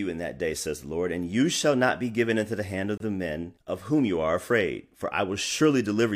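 At 2.98 s the speech stops dead for about 27 ms, then resumes. This is a gap between stream segments. Two segments' time stamps don't quite meet, and the player fills the hole with silence. Its hard edges sound like a brief click-bounded dropout. Nothing is lost.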